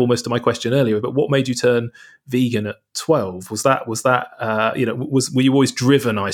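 Nothing here needs flagging, since no technical faults turn up anywhere in this bit of speech.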